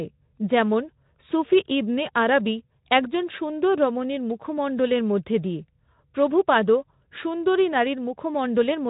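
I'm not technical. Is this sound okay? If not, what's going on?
Yes, the speech comes through the Speex voice coding it was sent with, and there is no technical fault in it.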